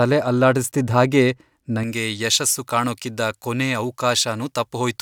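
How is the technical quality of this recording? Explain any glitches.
The recording has one clear fault. Pre-emphasis left on, from 1.83 s to the end: the treble boost applied for transmission was never undone by the matching de-emphasis, which fits a J.17 curve. Highs sit about 11 dB above 1 kHz at 10 kHz, so the speech turns thin, bright and sibilant.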